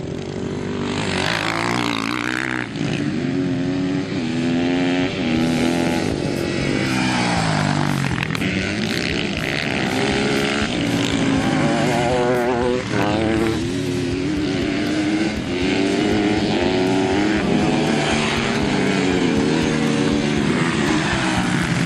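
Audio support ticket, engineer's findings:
Clock drift buffer slips: likely independent device clocks, around 500 ppm apart, dropping or repeating small sample blocks. Regular click every 0.68 s, 0.17 to 21.82 s.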